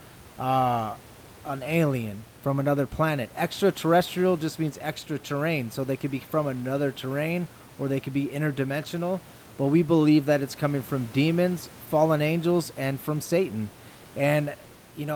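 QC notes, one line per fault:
No faults found in this speech clip.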